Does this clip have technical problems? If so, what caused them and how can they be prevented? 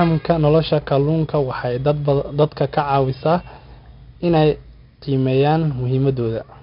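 Yes. The speech carries 4-bit ADPCM compression from start to finish. Each sample is stored as a coarse 4-bit step from a predicted value. The step size adapts as it goes. The resulting error is a gritty hiss that rises and falls with the speech level. The damage here is heavy, and sharp attacks crack where the step cannot grow fast enough. Nothing is heard above 5.3 kHz, which fits a low sample rate near 11 kHz and a bitrate around 44 kbps. To prevent it, record and store the speech as uncompressed PCM at 44.1 or 48 kHz.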